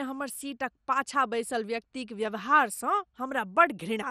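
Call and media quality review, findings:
Dull, gurgly, granular speech throughout, nothing above 15 kHz. Likely MP2 compression starving upper sub-bands so they flicker out; damage fits roughly 64 kbps.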